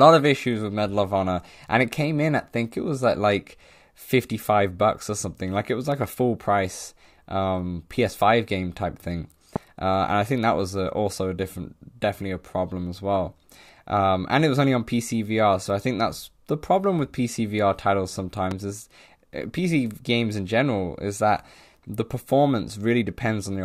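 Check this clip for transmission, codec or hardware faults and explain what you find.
Two loud pops interrupt this speech clip. The first runs from 9.56 to 9.58 s, just after "game type thing", and peaks well above the speech, roughly 15 dB higher. The second runs from 18.51 to 18.54 s and is a little quieter, around 10 dB over the speech. Each is a single sharp thump lasting about 25 ms. The speech carries on underneath. The likely cause is a sudden voltage step from a plug, switch, static discharge or driver glitch, shaped by the circuits that follow.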